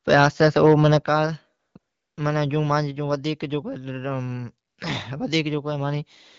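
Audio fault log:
0.12–0.97 s, microphone overload: The loudest syllables in this stretch have a harsh, crackly edge. Their peaks sound flattened, as if pushed about 4 dB past the ceiling. A few percent of the waveform seems squared off at the top. The likely cause is input gain set too high, so the converter ran out of range and sheared the peaks. The lost tops add buzzy overtones.
1.02 s, microphone volume stepped down: Right after the distorted run, the whole signal drops in level in one step, by about 8 dB. Voice and background fall together, with no fade. That single jump likely comes from the call software cutting the device's input gain after detecting the overload. The sound stays at the lower level afterwards, and the peaks no longer crackle.
1.59–1.75 s, 1.79–2.17 s, 4.67–4.77 s, AMR comfort noise: In these three pauses, 160 ms, 380 ms and 100 ms long, the real background is swapped for a smooth, steady hiss. 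At each edge the noise switches in and out rather than blending. The phone stopped sending speech frames, and the receiver generated stand-in noise from a rough level and spectrum sketch. The speech around the gaps keeps the clear, lightly coded sound of the wideband codec.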